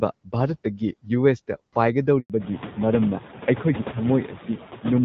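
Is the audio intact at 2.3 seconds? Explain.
No. A handover gap runs from 2.20 to 2.30 s. The call moved between networks and no speech frames arrived during the switch, so the sound cuts to silence for 100 ms and that stretch is lost. At 2.3 s the sound is only just resuming.

A fallback to narrowband begins at 2.30 s and lasts to the end. The call left HD Voice for an older narrowband AMR codec, so nothing above 4 kHz survives. The sound turns dull and rough, which fits a rate around 7.4 kbit/s.

Noise suppressor artifacts are present at this moment as throughout. The suppressor pulls down bands it judges to be steady noise by about 9 dB, frame by frame, so the residual background dips between phrases and swells under them.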